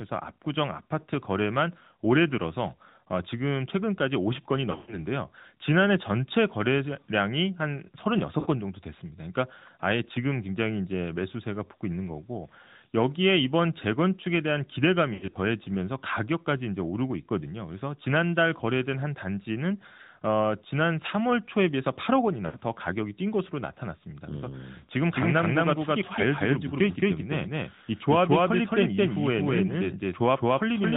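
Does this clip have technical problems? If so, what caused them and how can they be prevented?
Yes. The AMR narrowband mobile codec runs throughout: the sound is band-limited below 4 kHz and has a buzzy, synthetic edge, which fits a 10.2 kbps mode. A wideband codec or higher-quality connection would prevent this.

Lost AMR speech frames occur at 4.72–5.07 s (longest run 120 ms), 8.40–8.47 s, 15.14–15.36 s and 22.46–22.57 s. The decoder stretches the last good sound and fades it, then recovers roughly. A stronger radio signal or better error protection would prevent these.

A doubled audio track runs from 25.0 s to the end: an equally loud, dry copy trails around a fifth of a second behind. It is likely a second, slower capture path. Muting the duplicate input or monitoring path would prevent it.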